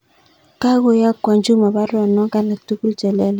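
No technical faults are audible.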